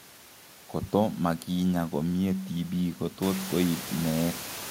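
No technical faults can be heard in the speech. The room's background noise rises by about 13 dB around the three-second mark and still sits about 14 dB below the speech after that.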